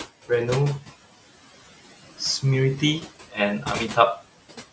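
Throughout the speech, noise suppressor artifacts can be heard. The suppressor judges steady bands to be noise and lowers them frame by frame, cutting the room noise by about 14 dB. That noise, about 17 dB below the speech, sinks in pauses and rises again under speech.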